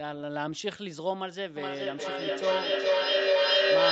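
From 1.56 s to the end, a feedback howl builds: sound loops between a nearby microphone and loudspeaker, gaining on each pass and narrowing to around 500 Hz. It peaks about 9 dB above the speech, with the loop repeating roughly every 400 ms, shown as a thickening horizontal band on a spectrogram and a swelling waveform envelope.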